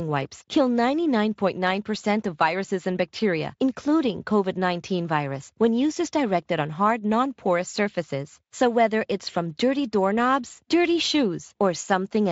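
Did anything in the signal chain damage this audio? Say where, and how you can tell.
No, the signal chain leaves nothing that can be heard as damage in this speech, and the Speex coding stage it passes through leaves at most faint traces of its processing.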